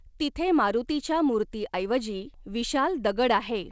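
No technical faults are audible.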